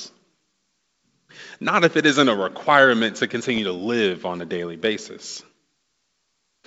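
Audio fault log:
3.50–3.59 s, bit errors on an ADPCM link: between "isn't a requirement to" and "to live on a", pops and a rough burst with brief level jumps. Each flipped bit derails the decoder's step size and predictor, so roughness rings on briefly instead of leaving a clean gap.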